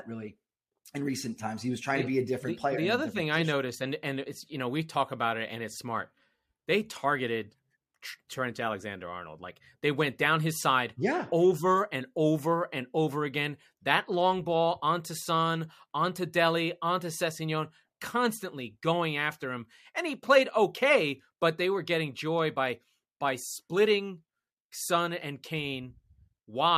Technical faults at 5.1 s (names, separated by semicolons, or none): sample clock jitter